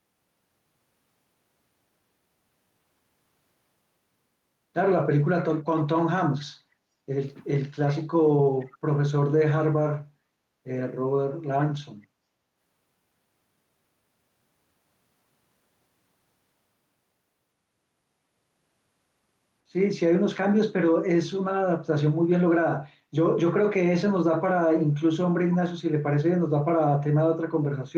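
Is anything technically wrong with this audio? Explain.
Yes, there's a short echo leak from 8.59 to 8.78 s, just under a fifth of a second long. A faint, delayed copy of the speech surfaces about 456 ms after the original, sitting roughly 30 dB below it, so it's a quiet ghost rather than an obvious repeat. The likely cause is a far end on loudspeaker whose echo canceller let a scrap of its mic pickup slip through and get sent back down the line.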